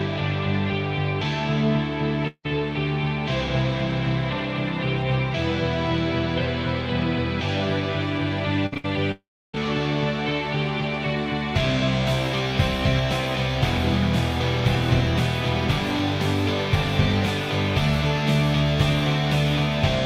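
Long network dropout, 2.27 to 2.46 s: the sound is carried on as a fading buzz or hiss, then about 60 ms of near-silence follows. This is likely a stretch where no audio arrived, so roughly 180 ms of the original is lost when playback resumes further along.

Burst of packet loss, 8.66 to 8.74 s: about 60 ms of audio failed to arrive in time. The receiver stretched the last sound across the gap while turning it down, giving a held buzz or a dying hiss before the sound jumps ahead with that stretch missing.

Short concealed packet loss, 8.74 to 8.77 s: about 20 ms went missing, and the receiver covered it by briefly extending the preceding sound and blending back into the real audio. It is heard as a quick smear or wobble between the two longer gaps.

Burst of packet loss, 8.77 to 8.86 s: another roughly 60 ms hole, filled the same way with a continuation of the last sound that fades as it goes. 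The audio then resumes past the lost section.

Long network dropout, 9.12 to 9.60 s: about 420 ms of audio never plays. The last sound is extended briefly and fades away, and then roughly 310 ms of silence or low steady noise follows before the audio picks up further on, with the intervening material gone.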